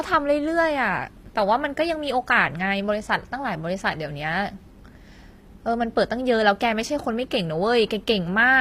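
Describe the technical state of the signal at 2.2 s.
HE-AAC compression is audible at 2.2 s and persists throughout the speech. The treble is likely rebuilt by spectral band replication, consistent with roughly 24 kbps, so the upper band is copied from lower bands, sounds gritty and lispy on sibilants, and nothing is left above 15.5 kHz.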